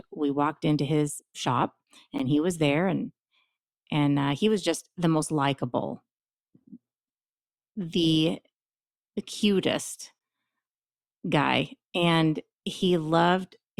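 At 2.19 s the speech is cut by a gap between stream segments: a hole of silence about 12 ms long with abrupt edges on both sides. Two consecutive segments' timestamps did not meet, and the player filled the space with silence. Unlike a packet-loss dropout, no audio is missing. The speech picks up exactly where it stopped and simply arrives about 10.5 ms later than it otherwise would.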